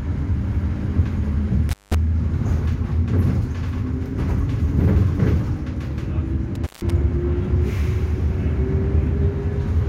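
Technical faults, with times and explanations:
1.69 to 1.95 s and 6.55 to 6.92 s, intermittent contact: the audio drops out twice, for about 184 ms the first time and 154 ms the second. Each dropout has crackle at its edges, and faint hiss fills the gap. That's a loose plug or cable briefly losing contact. The signal path physically opens, so the sound vanishes, and the scratchy make-and-break of the contact produces the crackle as it opens and closes again.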